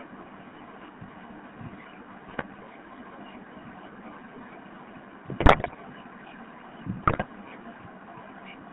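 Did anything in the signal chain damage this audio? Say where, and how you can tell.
Yes. The damage comes from the codec stage, and again from the radio link feeding the decoder. Throughout the speech there is the buzzy, gravelly roughness of the GSM full-rate codec. The band stops near 3.5 kHz at the top and 150 Hz at the bottom, and the coarse, regular-pulse texture fits a 13 kbps full-rate coder. The decoder rebuilds the voice from a vocal-tract filter driven by sparse pulses, which is why the grain sounds rough rather than simply muffled. An ordinary telephone band-limit would leave the voice smooth.

GSM bit errors hit three short stretches: 2.28 to 2.45 s, 5.40 to 5.75 s, and 7.02 to 7.24 s. In each, the speech breaks into squawks, pops and gargling. Corrupted filter, pitch or gain values bend the spectrum or inflate the output frame by frame, and the middle burst is the longest. 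Packet loss sounds different. It leaves gaps or smeared repeats, not distorted, loud bursts.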